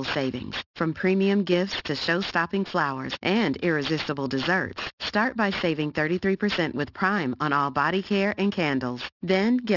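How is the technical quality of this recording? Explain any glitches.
The recording has one clear fault: aliasing that runs through the whole speech clip. The high end sounds gritty and metallic, especially on sibilants. The sample rate appears to have been cut without a proper anti-aliasing filter first, which fits a drop from 44.1 kHz to 12 kHz. Anything above 6 kHz had nowhere to go. It folded back below that edge as false, unrelated tones. These sit roughly 15 dB under the speech.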